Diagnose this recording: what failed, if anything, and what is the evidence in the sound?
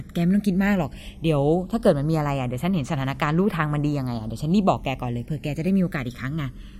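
Channels drifting apart, at the converter stage: the two channels come from devices on separate clocks, with an error of roughly 200 ppm. Across the whole clip the speech has a slow flanging sweep. As the delay between channels slides to under a millisecond by the end, the comb notches from the mono sum move steadily through the spectrum. A fixed offset between channels would leave the notches standing still.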